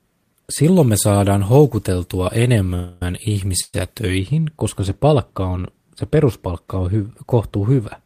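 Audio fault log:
0.64–4.18 s, pre-emphasis left on: treble is lifted by about 13 dB at 10 kHz relative to 1 kHz, fitting a 75 µs FM curve with no matching de-emphasis. The speech sounds thin, bright and sibilant until just before "koska se palkka on".
2.74–3.02 s and 3.61–3.74 s, call audio freeze: the audio stalls and the last sound is stretched into a fading buzz, for 270 ms and then 121 ms. The second stall ends in about 30 ms of silence. Both are likely caused by delayed packets emptying the jitter buffer. Playback then resumes where it stopped, with nothing lost and the timing pushed later.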